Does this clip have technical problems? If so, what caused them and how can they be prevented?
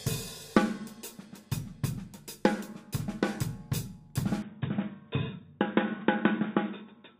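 Yes. At 4.42 s the sound abruptly turns dull and boxy, and stays that way to the end. Above that point nothing reaches past 3.8 kHz. There is no gap at the change and the loudness holds steady. A faint new background noise appears, well below the signal. The likely cause is an input switched to a poorer device, such as a headset in its narrowband call profile. To prevent it, lock the recording input to one microphone and disable automatic device switching.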